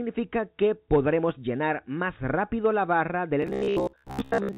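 From 3.42 s to the end of the clip at 4.58 s, the sound turns into a rigid metallic buzz: robotic sound from repeated short buffers. The likely cause is audio arriving too seldom, so a segment of about 15 ms is replayed in place of most of the real signal, which imposes a fixed 66.8 Hz buzz. On a waveform this shows as an identical shape repeating every 15 ms. On a spectrogram it shows as evenly spaced harmonics of 66.8 Hz, all stopping at the 4 kHz ceiling of the call path.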